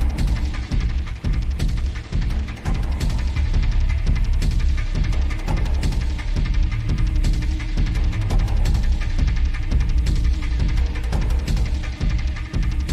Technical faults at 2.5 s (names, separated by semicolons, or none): call bitrate drop